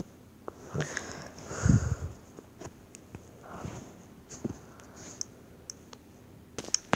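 Nothing in the audio stands out as a technical fault, so there's nothing here to pick apart.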